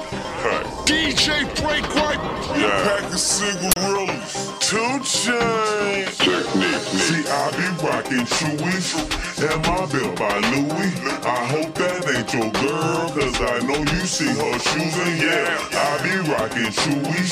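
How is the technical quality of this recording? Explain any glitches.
There is one clear glitch: an uninitialised buffer fault at 3.72 s, lasting about 46 ms until 3.76 s. A block of output was sent to playback before any audio had been written into it, so whatever data was left in that memory was played out as samples. The result is a brief, loud burst of harsh digital noise unrelated to the surrounding sound. Its length fits a 2048-sample buffer.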